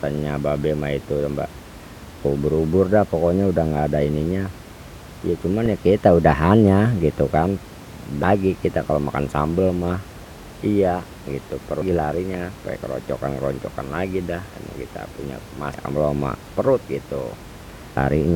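Damaged data in a compressed stream produces brief blips at 5.66, 8.23, 11.82, 15.74 and 17.96 s in this speech. At each, corrupted bytes make the decoder misread frames and lose sync until the next frame header, over room noise about 19 dB below the speech.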